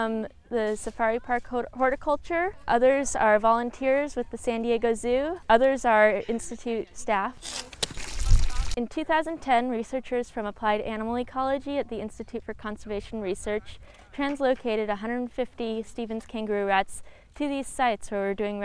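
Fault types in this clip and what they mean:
No audible faults were found in this recording.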